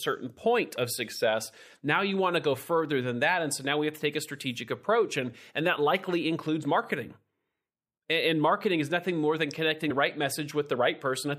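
A speech recording with compressed frames skipped twice: the decoder dropped whole blocks of the compressed stream, either missing or rejected as corrupt, so playback jumps forward by whole frames of about 23.2 ms, which fits a 1024-sample frame. At 2.53 s a single frame goes, losing about 20 ms. At 9.89 to 9.91 s about three frames vanish, roughly 70 ms.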